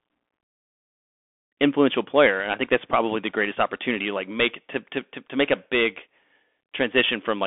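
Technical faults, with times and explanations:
Throughout, Bluetooth CVSD headset codec: the speech sits in a 250 Hz to 3.5 kHz band with nothing above 3.8 kHz, and the one-bit up-or-down coding plainly roughens s sounds and leaves granular hiss beneath, unlike a clean telephone-band filter.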